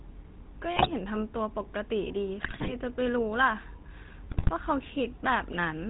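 Throughout, the speech passes through a GSM full-rate codec, which fits the 13 kbps coder: a vocal-tract model excited by sparse regular pulses, with nothing kept above 4 kHz. The result is plainly audible as a dull, buzzy, gravelly roughness on the voice.

From 0.76 to 0.91 s, 2.40 to 2.74 s and 4.30 to 4.51 s, GSM bit errors corrupt the decoder's filter, pitch and gain values on what sounds like a weak link. Each burst warps the spectrum and level into squawks, pops and gargling.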